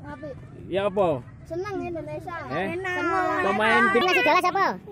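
From 4.01 s to the end at 4.91 s there is a wrong sample rate fault. The sound runs 1.5 times too fast and sits about seven semitones higher than before, so it comes across as hurried and bright. Speed and pitch shift together by the same ratio, which points to the samples being played back without rate conversion, consistent with material captured at 32 kHz being clocked out at 48 kHz.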